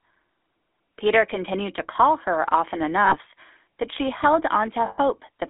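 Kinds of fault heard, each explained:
GSM full-rate codec: the speech passes through a vocal-tract model driven by regular pulses, leaving a plainly audible buzzy, gravelly roughness that fits 13 kbps full-rate GSM. A spectrogram shows energy confined between 250 Hz and 3.5 kHz, with nothing above.
Lost GSM frames: twice the decoder held the last good frame and repeated it, producing a rough, metallic ring, 60 ms from 3.06 s and 120 ms from 4.86 s. The spectrogram shows frozen, repeating bands.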